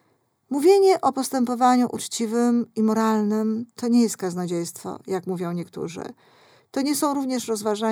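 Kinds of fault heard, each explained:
Nothing to flag here: the speech comes across without any technical faults worth noting.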